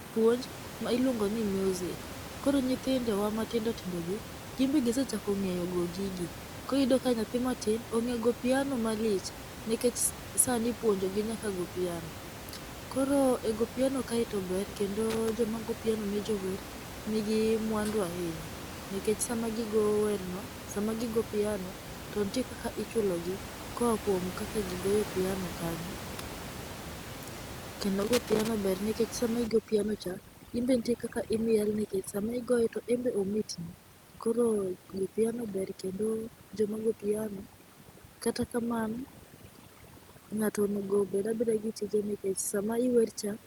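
Loose connector crackle breaks into the speech from 15.10 to 15.29 s and again from 28.01 to 28.48 s: a worn or dirty contact is making and breaking as it shifts, chopping the signal into irregular bursts of scratchy crackle. Overdone noise removal then takes hold from 29.47 s to the end, where the room noise, at about 12 dB and about 27 dB below the voice, is pushed too hard: frequency bands near the noise estimate are switched off, leaving near silence with twinkling specks.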